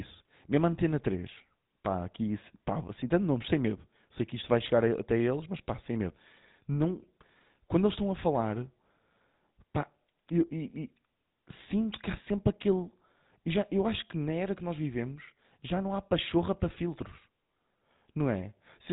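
The speech runs through the GSM full-rate codec for its entire length, and the damage is plainly audible. The codec rebuilds the signal from a vocal-tract model driven by a sparse, regularly spaced pulse excitation, which leaves a buzzy, gravelly roughness on the voice. The band stops at about 3.8 kHz, so sibilants and upper harmonics are gone. The coarse, grainy texture fits a low bitrate around 13 kbps.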